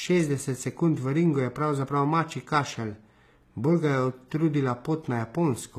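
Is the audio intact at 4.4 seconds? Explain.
No. At 4.4 seconds the speech carries the same damage heard across the whole clip, most likely HE-AAC compression at a very low rate, around 20 kbps. The treble is rebuilt by copying lower bands upward, so sibilants come out gritty, lispy and metallic, and the upper harmonics don't line up with those below. A plain low-pass or band-limited codec would simply dull the top end. Here the treble stays bright but sounds synthetic.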